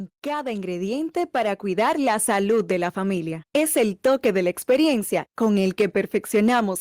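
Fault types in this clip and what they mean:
Automatic gain rising: the level control decided the input was too quiet and slowly cranked its gain up by about 7 dB, so between 0.23 and 1.95 s the speech and the background noise swell up together rather than the talker getting louder.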